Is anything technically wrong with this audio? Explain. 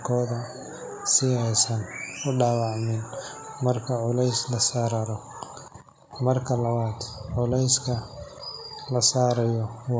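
No, nothing's wrong here; it's speech that went through a call's normal microphone processing, so the lowest bass is trimmed and nothing reaches above 8 kHz, which is just how that path works.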